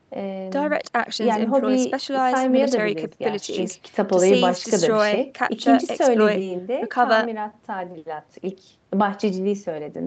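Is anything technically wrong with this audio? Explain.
No, nothing's wrong here; the speech simply carries the usual call-path character, with the Opus coding topping out around 8 kHz and the microphone processing trimming the deepest bass.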